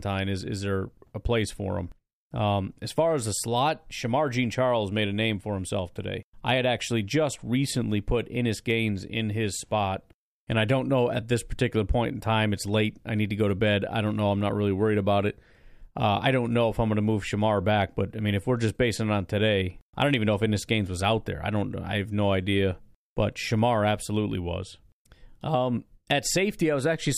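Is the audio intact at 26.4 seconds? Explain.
Yes, at 26.4 seconds the speech plays through intact, with no audible fault at that moment.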